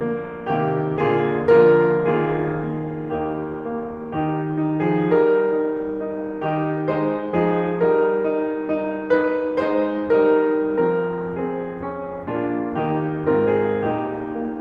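No technical faults can be heard anywhere in this music recording. There is nothing to mark at any point in the audio.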